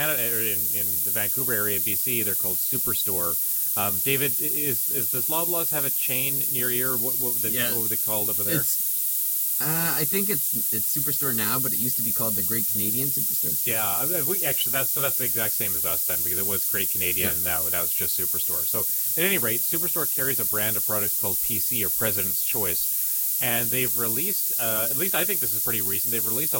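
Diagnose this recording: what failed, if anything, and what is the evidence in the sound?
Low bit depth with noise shaping, throughout the speech: a thin hiss climbs steeply toward the top of the band, only about 15 dB under the signal. This fits sample-format conversion to roughly 3 bits, with rounding error pushed upward.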